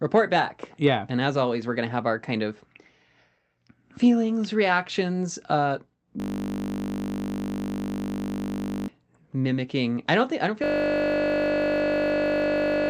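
Speech that twice collapses into a system hang loop: after "feelings reactions uh" from 6.2 to 8.88 s, resuming at "mimicking I don't think", and after "don't think I don't" from 10.64 s to the end. A single 20 ms slice repeats exactly, producing a steady 50 Hz buzz rather than a stutter. It loses about three and two seconds of audio, unlike codec concealment, which smears and fades. The call-path band limit sits near 8 kHz.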